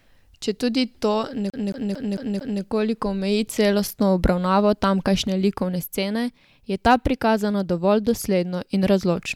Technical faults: CD stuck on one turn

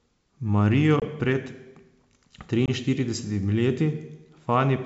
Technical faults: packet loss on an ADPCM call

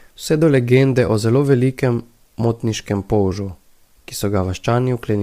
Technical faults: low-delay AAC compression

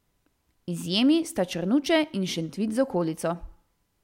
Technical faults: none

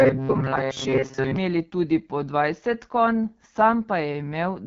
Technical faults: AMR wideband (HD Voice) codec; robotic sound from repeated short buffers

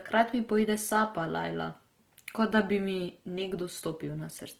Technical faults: Opus compression

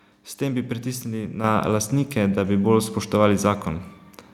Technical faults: microphone volume stepped up

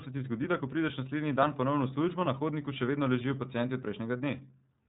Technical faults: iLBC codec

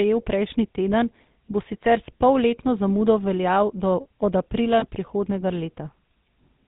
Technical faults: GSM full-rate codec; lost GSM frames

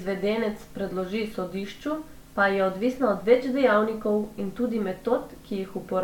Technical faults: none

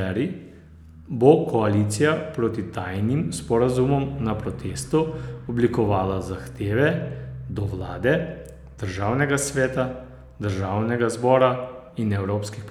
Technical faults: none

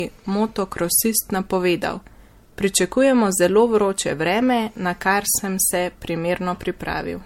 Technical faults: generation loss

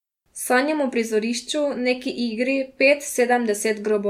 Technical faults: none

